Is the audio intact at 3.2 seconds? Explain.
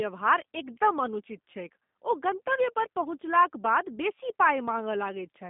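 No. G.729 codec damage runs throughout, including 3.2 s: speech is rebuilt from a vocal-tract filter and sparse pulses, consistent with 8 kbit/s, sounding rough and synthetic, with nothing above 3.7 kHz.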